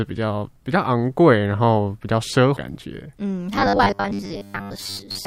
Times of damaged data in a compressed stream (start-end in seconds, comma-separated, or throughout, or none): 2.56